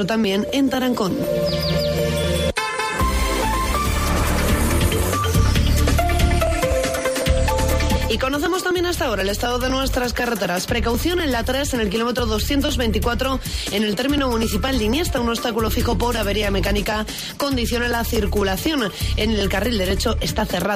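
From 0.24 to 20.65 s there are periodic USB or driver dropouts: about a millisecond of audio skipped every 0.249 s, giving steady ticks wherever there's signal.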